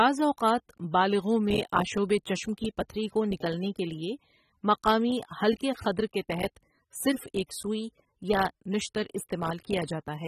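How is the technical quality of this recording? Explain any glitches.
The recording has audible compression damage throughout. From start to finish the speech sounds dull and smeared, with a watery, fizzy texture on sibilants and held sounds. This is likely AAC compression at a low bitrate, which fits roughly 27 kbps AAC-LC. The coder discards detail, so nothing survives above 13.8 kHz. A spectrogram would show a hard ceiling there.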